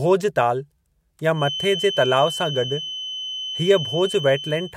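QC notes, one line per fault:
1.31 s to end, feedback whistle: a thin, steady 3 kHz tone roughly 10 dB under the speech, swelling and fading slowly in level; likely a speaker-to-mic loop held just at the edge of feedback.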